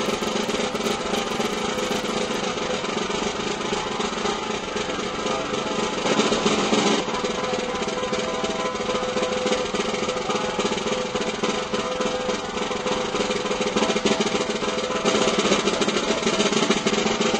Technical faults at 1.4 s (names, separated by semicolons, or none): filter restarted on every block